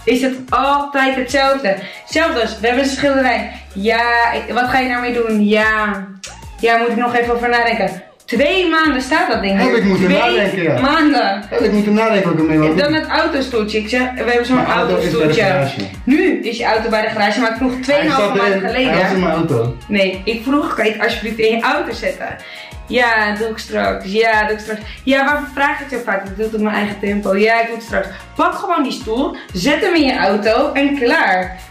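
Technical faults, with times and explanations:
throughout, hard clipping: the loudest moments crackle, because the signal was pushed about 3 dB past what one stage could pass, so under one percent of samples had their peaks cut flat, and those flattened tops add harmonics high in the spectrum.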